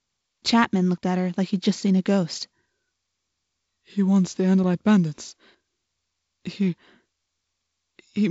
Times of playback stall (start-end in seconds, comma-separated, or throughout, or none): none